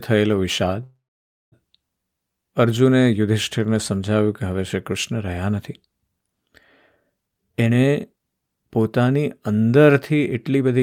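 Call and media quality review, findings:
Call audio freeze, 0.83 to 1.54 s: sound stalls, last fragment extended as a fading buzz or hiss, then about 540 ms of silence before resuming exactly where it stopped. Nothing lost; roughly 685 ms of added delay. Likely delayed packets draining the jitter buffer.

Jitter buffer speed-up, 7.27 to 9.71 s: speech runs hurried at 128% speed with unchanged pitch. Receiver trimming repeated pitch-period slices, about 0.7 s removed in total, to work off the excess delay built up earlier.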